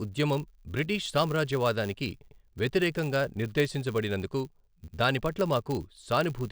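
From the start of this speech clip a steady buzz runs underneath at 100 Hz, a filter restarted on every block. The filter drops its memory at each block boundary and begins again from silence. Each restart leaves a small transient. At 100 restarts per second these merge into a buzz, which fits 10 ms blocks. The buzz rises and falls with the speech level, louder on strong syllables and fading in pauses.

At 2.28 s, after "ఉద్యమం బ్రిటీష్ సామ్రాజ్యవాదానికి" and before "వ్యతిరేకంగా నిర్దేశించబడినందుకు దాని పట్ల", a stutter marks overlapping chunks. The audio was handled in chunks of 2.5 s, each starting before the last had ended. So 100 ms plays twice, through 2.38 s. The same happens from 4.88 s to 4.98 s, after "బ్రిటీష్ సామ్రాజ్యవాదానికి వ్యతిరేకంగా నిర్దేశించబడినందుకు" and before "దాని పట్ల". The two joins are 2.6 s apart.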